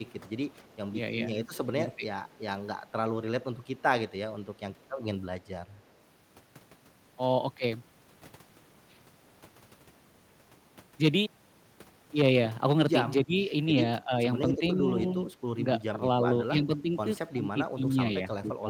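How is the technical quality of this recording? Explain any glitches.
The recording has two kinds of glitch: the talker's speech is repeatedly pushed down, and faint echoes of it come back twice.

Speech suppressed in double talk: From 1.54 to 2.07 s the speech dips by about 15 dB, for roughly 0.4 s in total. It drops about 10 dB from 13.25 to 13.43 s, and about 15 dB from 14.02 s to the end. The likely cause is an echo canceller that mistook overlapping talk for echo and turned it down.

Echo leak: A faint delayed copy of the speech is heard at 2.32 to 2.37 s, about 35 dB below the speech. Another comes at 3.63 to 3.82 s, about 40 dB down, both trailing by 293 ms. This is likely loudspeaker pickup that the echo canceller left unremoved.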